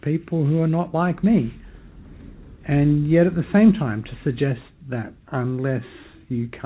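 Nothing stood out on listening; the audio comes through a G.711 A-law call path at 64 kbps, with nothing above 4 kHz.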